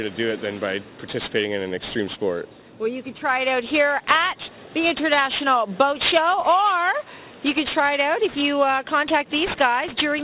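From start to finish the high end sounds gritty and metallic, with hiss-like components sitting at pitches that bear no relation to the sound itself, and the spectrum running hard up to a sharp edge at 4 kHz. This is aliasing: the audio was taken down to a lower rate, which fits a conversion from 44.1 kHz to 8 kHz, without first removing content above 4 kHz. That content folded back below the edge, landing roughly 15 dB under the wanted signal.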